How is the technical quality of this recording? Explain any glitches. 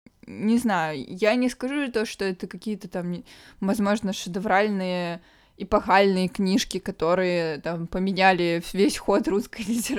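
Nothing goes wrong technically anywhere in this recording.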